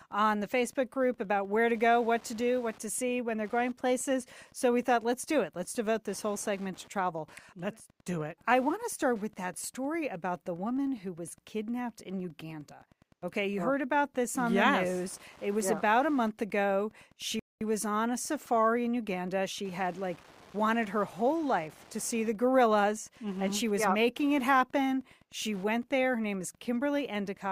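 Wi-Fi interference runs through the whole of this speech recording as a steady ticking about ten times a second, set at roughly 30 dB below the voice. A nearby Wi-Fi radio is coupling into the audio circuit, which rectifies its transmissions. Its beacon repeats every 102.4 ms, producing the regular tick, and any data bursts between beacons add rougher, irregular rasps. A rebuffering stall occurs from 17.39 s to 17.61 s. The player ran short of downloaded audio and went silent while it waited, then picked up exactly where it left off. No speech is dropped, but about 215 ms of dead air is inserted into the timeline, so everything after 17.6 s arrives that much later than it should.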